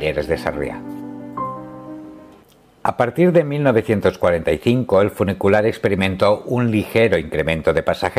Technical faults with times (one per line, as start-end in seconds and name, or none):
none